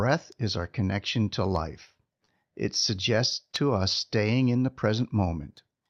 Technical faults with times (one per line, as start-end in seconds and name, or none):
0.49-4.27 scattered short gaps